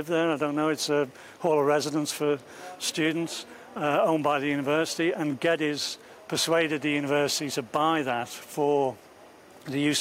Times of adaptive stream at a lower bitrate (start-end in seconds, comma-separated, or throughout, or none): none